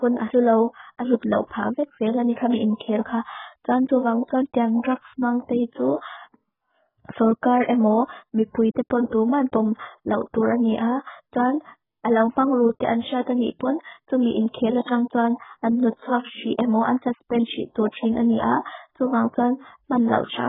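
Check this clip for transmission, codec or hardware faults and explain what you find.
There's one fault, and it runs through the whole recording: heavy AAC compression damage, most likely from AAC-LC at a very low bitrate. Nothing survives above about 3.8 kHz, so the speech sounds dull and smeared. That suggests the encoder starved its frequency lines of bits, cut the top band and left spectral holes, which gives sibilants and sustained sounds a warbly, fizzy texture.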